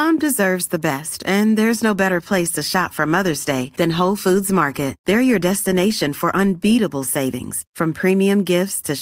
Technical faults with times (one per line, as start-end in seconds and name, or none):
none